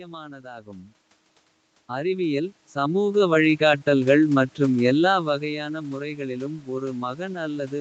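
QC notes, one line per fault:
1.87–4.15 s, automatic gain rising: the level climbs by about 9 dB over more than two seconds as the gain control decides the input is too quiet and gradually turns it up. Unlike a talker leaning in, the room noise swells along with the voice, and the rise is a slow ramp rather than a step, which marks it as processing and not movement at the microphone.
3.02–3.81 s, scattered short gaps: roughly five brief holes, the longest around 15 ms, are patched by extending the preceding sound, about 50 ms of concealment in all, near 7% of that stretch. They come across as small ticks and smears rather than a dropout. The patching adds about 14 ms, so the timing stretches slightly. A single long loss would instead give one obvious buzzy or robotic stretch.
5.53–7.80 s, automatic gain rising: after the input falls by about 12 dB, close to where the talker shifts position around 5 s, the gain control slowly raises its gain to restore the level and is still climbing when the clip ends. 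The talker's move accounts for the drop itself. The recovery that follows lifts the background with the voice over seconds, and that ramp is the mark of gain control rather than further movement.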